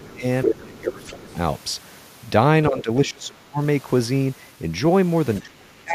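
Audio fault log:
0.02–0.24 s, 0.45–1.37 s, 2.69–2.90 s, 3.06–3.60 s, 5.41–5.95 s: speech suppressed in double talk. The speech level dips sharply in each span, by roughly 10 to 30 dB at worst. This likely comes from an echo canceller that cannot separate the talker from overlapping far-end audio and attenuates both.
0.44–0.54 s, 1.04–1.13 s: other side's voice leaking through. A second voice appears in brief scraps, the first at about the same level as the main speech and the second much fainter. This is likely residual loudspeaker echo that the echo canceller failed to remove from the microphone signal.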